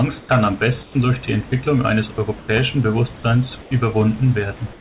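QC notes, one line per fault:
0.20–0.29 s, 0.83–0.95 s, 2.39–2.48 s, 3.62–3.71 s: comfort noise in place of the background. In each pause the sender likely stopped transmitting once its voice detector heard no speech, and the receiver filled the 90 to 120 ms gap with generated noise. The room background is replaced by a smooth, featureless hiss about 3 to 5 dB quieter, so the floor dips before returning. The second patch ends just before "durch die".
2.15–2.18 s: sound dropped by the voice detector. The detector likely mistook this sound for background and halted transmission for 30 ms. The receiver played synthetic noise instead, so that brief piece of speech is lost. A short flat, hissy gap breaks the speech until the detector triggers again and the speech resumes.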